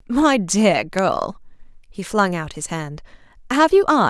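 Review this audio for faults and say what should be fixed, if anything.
Three isolated sharp ticks cut through the speech at 0.99 s, 2.19 s and 3.72 s, each a single broadband click with no relation to what is being said, loudest at about -6 dBFS, then about -18 and about -24 dBFS. These are bit error spikes: a flipped bit in memory or on a digital link throws one or two samples off by a power of two before the waveform snaps back. Error-checked storage and transfer would prevent them.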